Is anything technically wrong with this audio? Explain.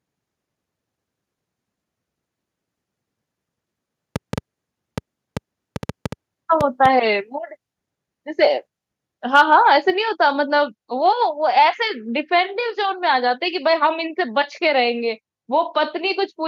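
Yes, there are two faults. From 4.16 to 6.86 s, a train of clicks appears: roughly ten pulses at irregular spacing, about 4 per second, peaking about 5 dB above the speech. The likely cause is electrical interference or a faulty connection. Between 9.35 and 9.42 s there is microphone overload, with peaks about 3 dB past the converter's limit and a few percent of samples flattened. This is likely from excessive input gain, and it gives a harsh, crackling edge.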